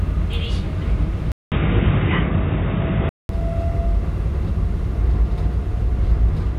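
At 1.32 s a 200 ms silence gives way to band-limited sound with nothing above 3.8 kHz, dull and boxy, with a faint new background noise at an unchanged level, until 3.29 s. The likely cause is an input switched to a poorer device.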